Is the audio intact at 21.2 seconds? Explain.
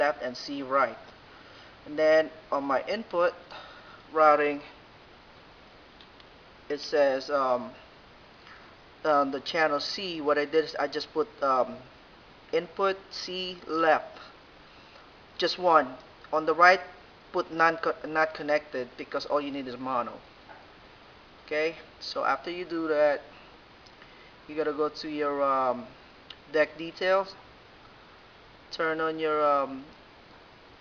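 Yes, the audio is intact at 21.2 seconds, with no fault of any kind at that point.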